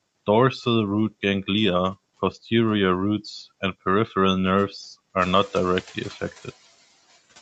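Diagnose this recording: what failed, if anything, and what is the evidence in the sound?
Computer activity noise enters at the analogue wiring stage and runs through the whole clip: a buzz pulsing at roughly 500 Hz, sitting roughly 30 dB below the speech. Its rhythm doesn't follow the talker, so the source is not acoustic. Current drawn by the processor, graphics card or mouse modulates the shared ground that the microphone circuit references, and that ground movement is picked up as a buzz.

Noise suppressor artifacts come from the call processing stage and are present from start to end. The suppressor pulls steady background down by about 15 dB in the gaps between phrases, and the noise rises again under the speech, so the floor pumps with the talker. The suppressor is attenuating each frequency band frame by frame wherever it judges the content to be stationary noise.

Noise suppressor catching up appears from 5.18 s to 6.23 s, in the same call processing stage. 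The room noise steps up by about 14 dB at around 5 s. For about 1.05 s the louder noise passes with only about 7 dB of reduction, then sinks as the suppressor's noise estimate adapts to the new level. The brief surge of less-reduced noise is that estimate lagging behind the sudden rise, heard through the 8 kHz-limited call bandwidth.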